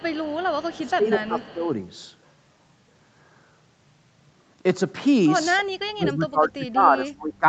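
From 0.0 to 0.9 s a faint copy of the speech trails the original by 215 ms, roughly 25 dB below it. This is an echo leak, likely from a loudspeaker on the far side whose echo canceller let part of the returned signal through. Unlike reverberation, it is a single distinct repeat at a fixed lag rather than a smooth decay, and it returns at the same 215 ms delay from 1.34 to 1.72 s.

Overlapping that first echo, from 0.76 to 1.69 s, the speech itself dips by up to about 10 dB for much of the stretch. This is speech suppressed in double talk, likely because the canceller could not separate the local talker from the echo and turned both down. Where the echo leak adds a delayed copy, this fault removes level from the main speech, which pumps down in patches. The same fault returns far more severely from 5.93 to 7.46 s, with drops of up to about 30 dB across about 1.5 s of those last seconds.

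Throughout, the sound is band-limited at 8 kHz by the Opus call path.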